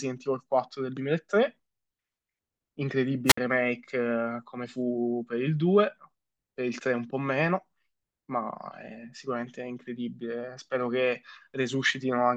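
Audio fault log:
3.26 to 3.38 s, wireless microphone squelch dropout. The radio link weakens and hiss rises briefly. The receiver's squelch then mutes the output for about 59 ms, leaving a hole of near silence. The speech returns when the signal recovers.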